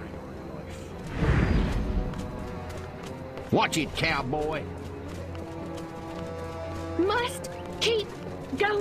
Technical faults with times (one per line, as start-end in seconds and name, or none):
1.20-1.25 corrupt frame decoded
3.49-3.52 corrupt frame decoded
6.14 corrupt frame decoded